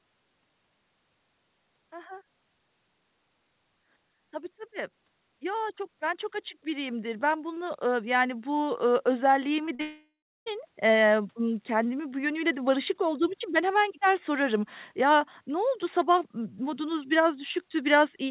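From 4.31 s to about 10.74 s an automatic gain rise lifts the level by about 9 dB. The speech and its background noise swell together, steadily rather than in a jump. On a waveform the envelope widens gradually across those six seconds, and the noise floor between phrases grows with it. On a spectrogram the whole picture brightens evenly, which is the mark of a gain stage reacting to an input it judged too quiet.

Two short concealed packet losses follow, at 9.66 s (about 20 ms missing) and at 9.75 s (about 40 ms, ending at 9.81 s). In each, the receiver covered the missing audio by extending the preceding sound and then blending back, so it is heard as a quick smear or wobble. On a spectrogram the last sound briefly freezes into a flat, slightly blurred patch.

Straight after, from 9.81 s to 10.48 s, the sound turns into a fading continuation of the last sound, then roughly a third of a second of silence, likely a long network dropout. 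About two thirds of a second of speech is gone, and the speech resumes further along. A spectrogram shows a smoothed copy of the last sound fading out, then an empty gap. All of it sits inside the call codec's band, with nothing above 4 kHz, which fits G.711 A-law at 64 kbps.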